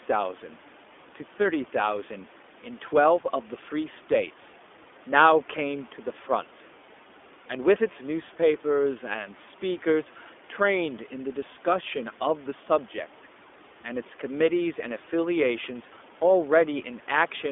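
From start to finish the speech carries the sound of the iLBC codec. Each 20 ms frame's excitation is coded on its own, which gives a slightly rough, synthetic edge that is plainly audible, consistent with its 15.2 kbps mode. The telephone line passes only about 250 Hz to 3.5 kHz, so a spectrogram shows a hard ceiling at 3.5 kHz and an empty floor below 250 Hz. The waveform looks thinner and less crisp, and the room noise sits about 29 dB below the speech.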